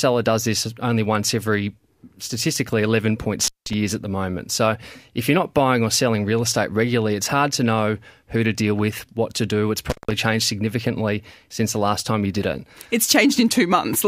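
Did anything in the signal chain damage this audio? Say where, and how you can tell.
Yes, in the analogue wiring: an intermittent contact, where a loose cable or plug briefly opened the line twice in this speech. The first break runs from 3.41 to 3.74 s, just after "only once every statistically" and before "at the moment". The second runs from 9.90 to 10.11 s, right before "changed significantly since the". Each opening lasts roughly 160 to 180 ms. The waveform collapses to near-flat hiss between spiky crackle edges. A spectrogram shows thin broadband vertical streaks bracketing a nearly empty gap.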